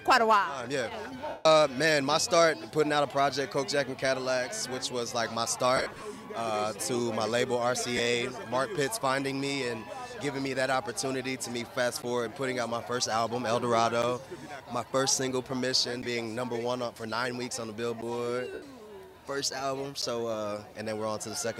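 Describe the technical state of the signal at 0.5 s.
At 0.5 s the signal is intact, with no fault present at that moment.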